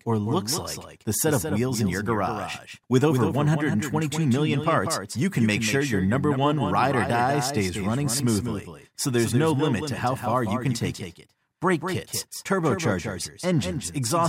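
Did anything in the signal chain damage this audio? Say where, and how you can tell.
Yes: a doubled audio track throughout, a copy about 5 dB quieter trailing around 200 ms, doubling every onset; likely a slower second capture path.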